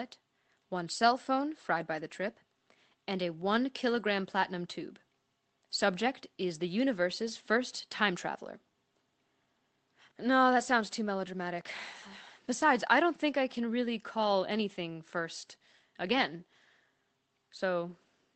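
Nothing stood out on listening to this speech, which comes through a call connection with the narrowed top end typical of such a link.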